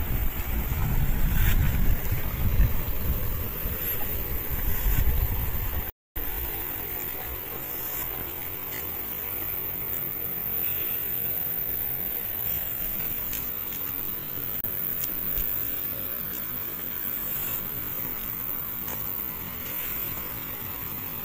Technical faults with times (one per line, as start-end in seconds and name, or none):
14.61-14.67 Bluetooth dropout